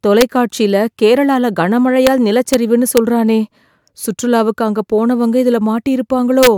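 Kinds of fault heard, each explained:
Integer overflow: Loud speech peaks went past the largest value the integer format can hold. Instead of being limited, they wrapped around to the opposite sign. Each such sample jumps across the full range, making a violent crack. Here it is heard at 0.21, 2.07, 2.54 and 2.97 s, and from 6.43 to 6.47 s. The overdrive is small, about 1 dB at most. Even so, each crack is far sharper than clipping.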